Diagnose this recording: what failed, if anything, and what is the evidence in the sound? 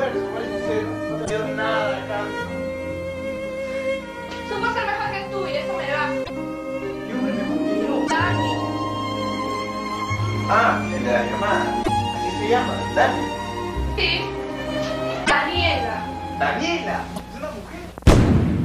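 Codec stage: short garbled bursts at 1.24, 6.23, 8.06, 11.82, 15.24 and 17.15 s, each two or three 26 ms frames long. That's likely a broken MP3 bit reservoir: after dropped frames, the decoder reads the wrong bytes.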